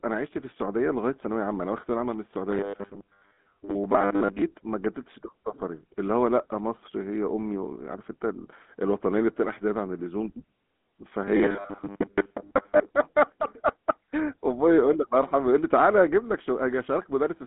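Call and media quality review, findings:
GSM full-rate codec throughout: buzzy, gravelly roughness, band about 200 Hz to 3.6 kHz, nothing above 3.8 kHz, which fits 13 kbps GSM. Roughness tracks the voice, with no fixed pitch.

Robotic sound from repeated short buffers, 2.51–4.42 s and 11.25–12.95 s: rigid metallic 100 Hz buzz, likely a 10 ms buffer repeated over most of the audio. Unlike codec roughness, the buzz rate is fixed.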